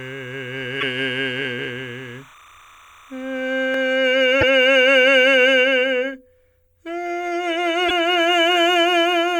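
From 0.00 to 3.96 s, timecode bleed sits behind the music. A steady chirping warble flips between two pitches near 1 kHz and 2 kHz. It runs at roughly 30 dB below the music, so it is faint but constant. The pattern fits linear timecode at 29.97 frames per second leaking in from a neighbouring track or cable. The code is a square wave, and its switching gives the warble.

At 0.80 s the music skips forward with a short glitch lasting about 30 ms. The same happens at 4.40 s and again at 7.88 s. Each break is about one 26.1 ms frame long. The likely cause is a broken MP3 bit reservoir. When frames are cut out, the next frame reaches back for borrowed data and finds the wrong bytes. The audio then jumps ahead with a brief damaged stretch.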